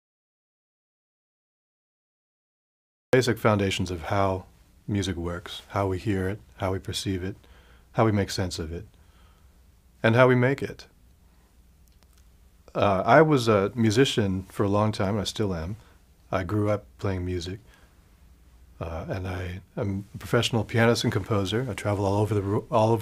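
The audio opens in dead silence with no room tone at all, and the sound only arrives at 3.13 s, entering mid-flow. This is an audio dropout to silence, likely from lost input, whether a disconnected device, failed link or stray mute, while recording continued.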